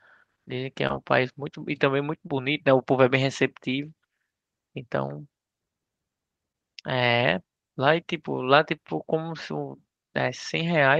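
Short concealed packet loss occurs four times, at 0.87, 2.27, 6.52 and 8.76 s. Each time about 20 ms of audio failed to arrive. The receiver bridged the gap by extending the preceding sound, then blended back. Each event is a brief smear or wobble.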